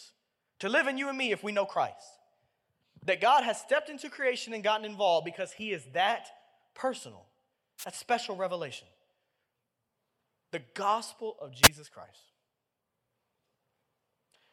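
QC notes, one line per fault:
7.78–7.85 s and 11.63–11.68 s, wireless microphone noise hit: two brief bursts of static, about 65 ms and 58 ms, right after "he is that personal" and "gospel of". The radio link from an analogue FM transmitter dipped as reflected paths cancelled, so receiver noise briefly rose.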